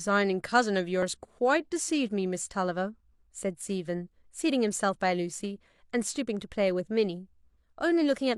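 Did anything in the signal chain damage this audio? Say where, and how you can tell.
Yes. There is overlap between stream segments during network delivery. Tiny skips at 1.03–1.06 s and 5.00–5.04 s, 4 s apart, are where trimming removed real speech.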